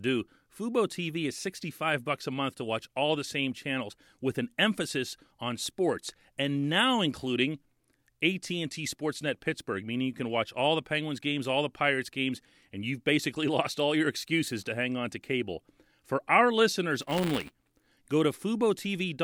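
In this speech clip, just after "our listeners", buffer tearing from 17.01 to 17.87 s adds a 200 Hz rattle, spliced-in audio roughly one lap old, showing as evenly spaced vertical clicks on a spectrogram.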